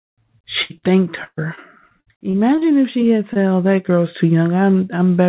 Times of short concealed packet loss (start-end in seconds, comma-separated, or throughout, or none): 3.33-3.37